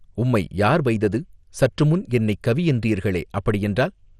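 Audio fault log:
throughout MP2 compression: speech sounds dull and gurgling, nothing above 14.3 kHz, likely from bit-starved Layer II sub-bands dropping out and coarse quantisation, fitting 64 kbps.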